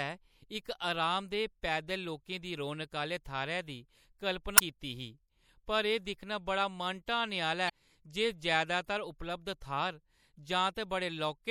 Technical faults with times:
0.00-11.50 MP3 compression
4.55-4.61 damaged data in a compressed stream
7.66-7.70 damaged data in a compressed stream

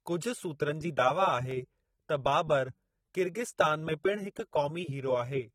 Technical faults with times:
0.00-5.55 AAC compression
1.51 block of digital silence

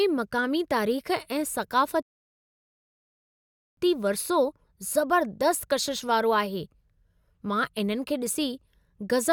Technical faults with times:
2.03-3.77 rebuffering stall

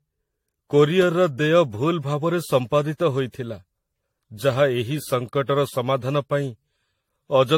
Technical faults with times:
0.00-7.58 generation loss

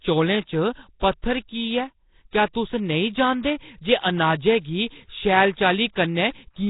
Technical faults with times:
0.00-6.69 Nellymoser compression

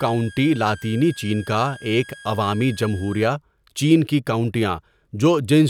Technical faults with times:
0.00-3.26 switching supply whistle

